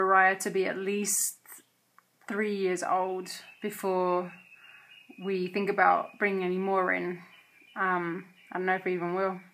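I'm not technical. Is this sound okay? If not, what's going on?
Yes, no faults are audible.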